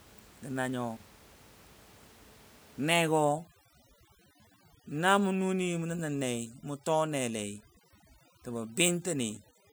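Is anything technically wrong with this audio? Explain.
Yes, two faults are audible in this speech recording. From 0.96 to 1.48 s there is an intermittent contact: a loose cable or plug opens for about 286 ms, so the speech drops out with crackle at each edge and only faint hiss remains during the gap. From 3.00 s to the end, overdone noise removal sets in, with a noise reducer pushed too hard pulling individual frequency bands down whenever they sit near its noise estimate. The background drops and breaks up into twinkling specks, and quieter parts of the voice vanish with it. The room noise underneath, about 26 dB below the speech, belongs to the recording rather than the system.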